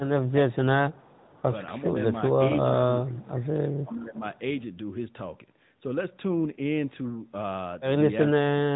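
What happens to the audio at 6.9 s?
At 6.9 s, as across the whole clip, the speech carries AMR narrowband mobile codec damage: coarse vocal-tract modelling makes it plainly buzzy and synthetic, consistent with a mid-rate mode around 10 kbps. A spectrogram shows a hard ceiling near 3.8 kHz, with nothing above.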